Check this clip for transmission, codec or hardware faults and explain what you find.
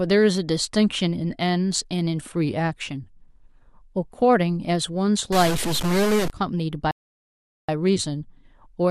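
Two faults are audible. From 5.32 to 6.30 s the speech picks up distortion, with noise filling the gaps, likely a stuck bit, one data bit held fixed so samples jump by its weight. From 6.91 to 7.69 s the sound drops to silence and then resumes exactly where it stopped. This is a rebuffering stall: the player ran out of buffered audio and waited, adding about 0.77 s.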